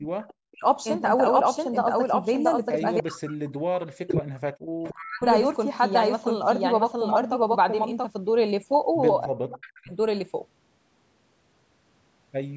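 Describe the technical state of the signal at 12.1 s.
At 12.1 s the speech is intact, with nothing wrong beyond the ordinary call microphone processing, which leaves the signal without content above 8 kHz.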